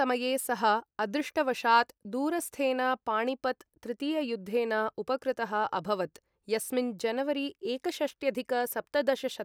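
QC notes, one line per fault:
No faults found in this speech recording. There is nothing to log against it.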